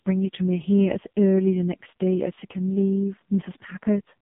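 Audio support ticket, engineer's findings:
AMR narrowband mobile codec in path, throughout: heavy damage fits lowest 4.75 kbps mode. Buzzy, synthetic speech; band 150 Hz to 3.5 kHz, nothing above.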